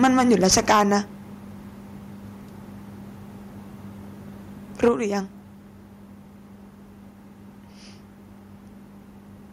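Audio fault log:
0.03–0.82 s, microphone overload: the opening is harsh and crackly, with the loudest syllables flattened and gritty. The input was likely driven about 10 dB past the converter's limit, so a small share of the waveform peaks were sliced flat.
0.72 s, microphone volume stepped down: voice and background both drop abruptly by about 4 dB, just before the distortion ends. The call software likely cut the device's input volume in a single step after detecting the clipping.
4.83–4.88 s, microphone overload: a brief crackling burst, with a sizeable share of samples squared off. The input was likely pushed about 5 dB beyond full scale.
4.88 s, microphone volume stepped down: right after that burst, the whole level falls by about 5 dB in one step. This was likely another automatic reduction of the input gain in response to the clipping.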